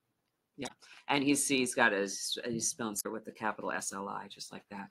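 At 0.64 to 0.71 s and again at 2.97 to 3.06 s there's damaged data in the compressed stream. The decoder hits frames it can't read properly, loses sync and hunts for the next header, so you get a brief glitch each time.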